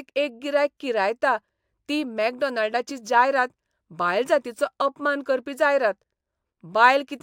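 A speech recording carrying imaging from linear upsampling across its whole length. The top of the band sounds dulled, and sibilants pick up a faint metallic shimmer. The spectrum points to a rate conversion from 24 kHz up to 44.1 kHz done by straight-line interpolation between samples. That acts as a weak low-pass filter, so it softens the highs and leaves a mirrored copy of the spectrum between 12 kHz and 24 kHz, roughly 40 dB below the speech.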